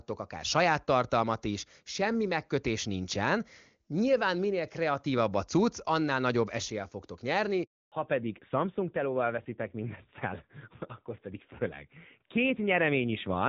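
A speech recording carried over a phone call. At 7.64 s, right after "annál nagyobb eséllyel fogtok", there is a handover gap. The call switched networks and no speech frames arrived during the move. The sound drops out fast and stays silent for 280 ms, until 7.92 s. Whatever was said in that span is gone. From 7.92 s to the end, the call shows a fallback to narrowband. Everything above 4 kHz disappears. The speech turns duller and rougher. This points to a change from the AMR wideband (HD Voice) codec to narrowband AMR, which fits a drop to about 7.4 kbit/s. Before the switch, the wideband coding carries the speech clearly, with at most faint codec damage.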